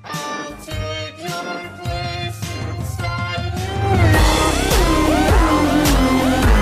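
No technical faults can be heard anywhere in this audio. Nothing in the sound points to a problem in how it was captured or delivered.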